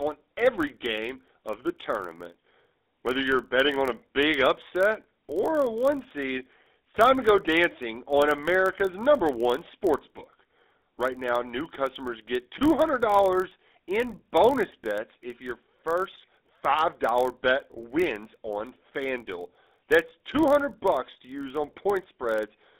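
From the first moment the speech carries the GSM full-rate codec's characteristic roughness, plainly audible throughout. The codec models the vocal tract and excites it with a coarse, regularly spaced pulse train, so voiced sounds come out buzzy and gravelly rather than smooth. The band is held to roughly 250 Hz to 3.7 kHz, removing low warmth and all upper brightness. The overall character is consistent with the 13 kbps full-rate coder.

A block size mismatch (padded) also runs the full length. The stage feeding the chain delivers shorter blocks than the next stage reads, and the shortfall in each block is filled with zeros. Those repeating silent slivers produce a steady buzz at 43.1 Hz, a rate that fits a 1024-sample read block. Because padding stretches the timeline, the audio plays back very slightly slow, by a factor of 0.999, with pitch essentially unchanged.

At 0.73 to 0.77 s, GSM bit errors cause a brief burst of damage. 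Corrupted bits reached the decoder and scrambled the parameters for a couple of frames, so the filter shape, pitch or gain briefly went wrong. The result is a short squawk-like disturbance, a sudden gargled, distorted blip where the spectrum and level jump before the decoder recovers on the following frames.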